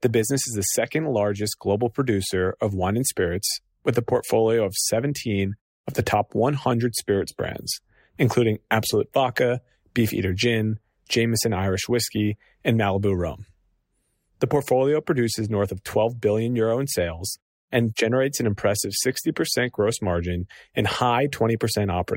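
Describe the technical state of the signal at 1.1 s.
At 1.1 s the speech signal is intact, with no audible fault.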